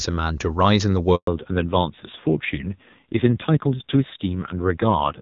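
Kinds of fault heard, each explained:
Handover gap: During a network handover no speech frames arrive, so the sound dies away abruptly at 1.15 s and stays silent for 120 ms until the new link starts at 1.27 s. Whatever was spoken in that interval is lost.
Fallback to narrowband: After the handover the call leaves HD Voice for an older narrowband codec. From 1.27 s to the end nothing above 4 kHz remains, and the speech turns dull and rough, consistent with a low-rate AMR-NB mode replacing clean high-rate AMR-WB.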